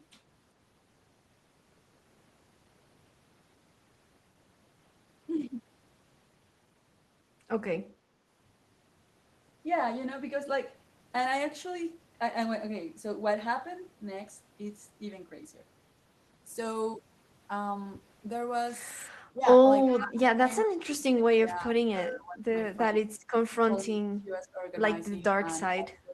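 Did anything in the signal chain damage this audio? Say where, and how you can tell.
Yes. Speech suppressed in double talk occurs at 19.09–19.42 s, 20.0–22.54 s, 22.91–23.12 s, 23.61–24.66 s and from 25.22 s to the end. This is a call-processing fault: the speech level dips by about 20 dB, and by about 25 dB in the 23.61 s stretch. The likely cause is an echo canceller that cannot separate the near talker from loudspeaker echo while both sides speak, so it attenuates everything.

Echo leak appears at 19.87–20.01 s, also in call processing. A faint, brief copy of the speech comes back about 391 ms late, roughly 20 dB below the direct sound. Its fixed delay and its low level give it away. It is likely residual loudspeaker pickup on one side that the echo canceller failed to remove fully, so a scrap of the talker's own speech was returned across the call path.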